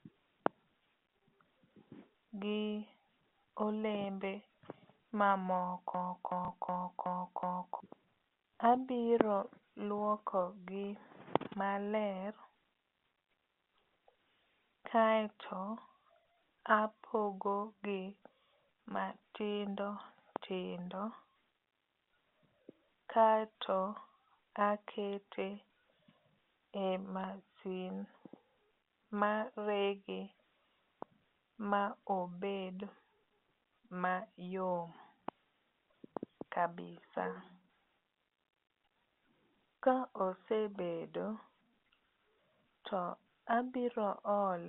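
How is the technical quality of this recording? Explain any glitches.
The recording has two glitches, both within about two seconds of each other. The sound arrives over a G.711 telephone line, so it is band-limited to roughly 200 Hz to 3.6 kHz.

System hang loop, 5.94 to 7.80 s. The computer or audio driver stalled, but the sound hardware kept replaying the contents of its ring buffer. A 0.37 s fragment repeats exactly five times at about 2.7 Hz, which fits a 16384-sample buffer. It sounds like a slow, mechanical stutter, and roughly two seconds of the real audio are lost in place of the repeats.

Packet loss with last packet repeated, 6.45 to 6.48 s. Within the looping stretch, about 30 ms of audio went missing, which points to a single lost packet. The receiver filled the gap by playing the previous packet again, giving a brief blip on top of the loop.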